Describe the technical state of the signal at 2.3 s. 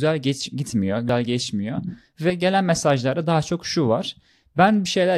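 At 2.30 s roughly one compressed frame of about 93 ms was skipped, so the speech jumps ahead about a tenth of a second, leaving a join just before "gelen mesajlarda daha çok".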